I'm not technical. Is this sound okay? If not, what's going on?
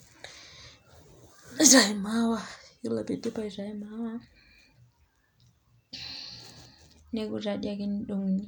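Yes, nothing technically wrong can be heard anywhere in this speech recording.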